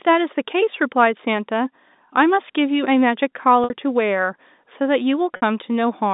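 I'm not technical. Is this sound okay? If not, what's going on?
No. There's packet loss with pitch repetition at 3.64 to 3.70 s and 5.36 to 5.42 s. Each time, about 60 ms of sound goes missing, and the receiver repeats the last bit of tone to cover it, giving a short buzzy hold. The narrow phone-line sound comes from G.711 telephone coding.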